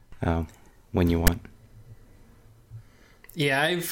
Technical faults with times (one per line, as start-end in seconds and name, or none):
1.27 file tags played as audio